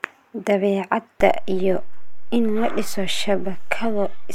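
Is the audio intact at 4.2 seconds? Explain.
No. A DC step begins at 1.20 s and persists through 4.2 s to the end: the waveform's zero line jumps to an offset. That shift is heard as a low thump at 1.20 s while the speech continues, and shows as a shifted baseline.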